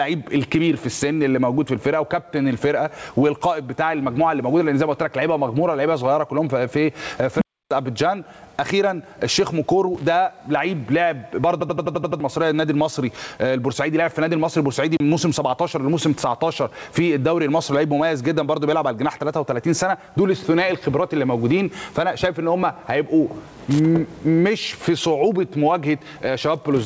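Right from the start there's gain pumping: the gain swings by roughly 15 dB under every loud moment, likely from gain set far too hot with a fast limiter clamping it down.

At 7.38 s an unstable filter takes off. A tone around 200 Hz balloons over about 36 ms, clips, then drops into roughly 0.3 s of silence until 7.71 s.

From 11.61 to 12.20 s a system hang loop repeats one 85 ms chunk seven times at about 11.7 Hz, a machine-gun stutter that fits a 4096-sample buffer, with around 0.7 s of real audio gone.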